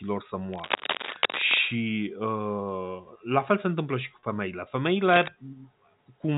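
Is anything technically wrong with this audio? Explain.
Yes. From 0.52 to 1.59 s, and again from 5.08 to 5.28 s after "întâmplă și cu femeile", there is cable scratch noise, likely a worn connector or lead shifting so its contact resistance jumps around, laying rough rustling bursts over the speech at roughly the speech's own loudness.

At 1.2 s, and at 4.20 to 4.23 s just after "se întâmplă și cu", there is packet loss with pitch repetition. About 30 ms of audio, consistent with one dropped packet, went missing each time, and the receiver filled the gap by repeating the last pitch cycle. Each gap is heard as a brief held, buzzy smear. The first one falls inside the scratching.

The telephone coding itself limits the speech to below 4 kHz, as the format does.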